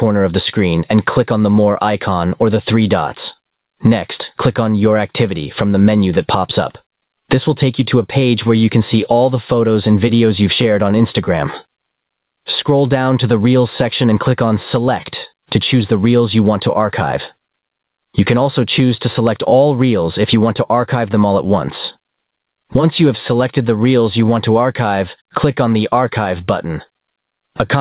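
Throughout the recording, gain pumping squashes loud and soft parts closer together in level, a swing of roughly 25 dB, likely from input gain set far too high with a fast limiter reacting. A noise gate would cut the background to silence instead of lifting it. The 4 kHz telephone-band ceiling from the call codec is separate.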